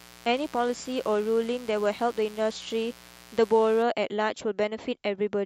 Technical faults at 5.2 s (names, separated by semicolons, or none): none